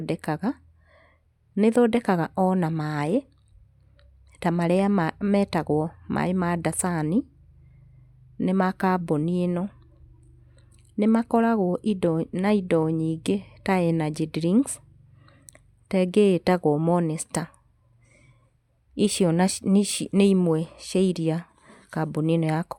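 No technical faults can be heard anywhere in the recording.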